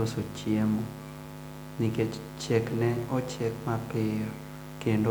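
No technical faults can be heard anywhere in this speech recording; the signal stays steady and intact throughout.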